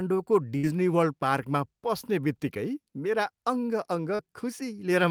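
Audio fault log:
0.57–0.65 s, burst of packet loss: about 60 ms of audio never arrived in time, so the receiver stretched the last received sound across roughly 58 ms, fading it as it went, then picked up again later with that stretch of speech simply absent. It comes across as a brief held buzz or dying hiss before an abrupt resumption. A spectrogram shows smooth, repeated, gradually darkening bands in place of normal detail, and the waveform shows a decaying, overly regular envelope ending at a jump.
4.15–4.21 s, short concealed packet loss: roughly 40 ms went missing, and the receiver covered about 36 ms of it by extrapolating the preceding sound (its pitch if voiced, shaped noise if not) before cross-fading into the real signal. The result is a quick smear or slight wobble, with a short consonant possibly swallowed. On a spectrogram the harmonics briefly flatten and blur; the waveform shows a short, unnaturally uniform patch with a soft seam at each end.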